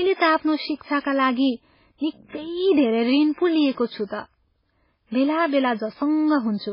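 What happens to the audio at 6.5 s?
At 6.5 s the speech carries the same damage heard throughout: likely MP3 compression. Nothing sounds above 5.3 kHz. Weak frequency lines drop in and out between frames, giving a watery, swirly texture. The heavy damage points to a very low bitrate, around 16 kbps.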